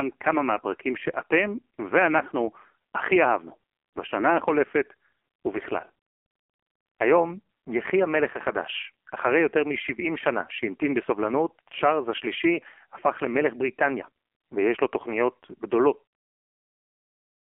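From start to finish the speech has gone through the AMR narrowband mobile codec, squeezed into a 300 Hz to 3.4 kHz phone band. The damage is heavy: a buzzy, synthetic, vocal-tract-model sound that fits AMR-NB's low 5.9 kbps mode, right through the smooth fade-out around 16 to 16.09 s.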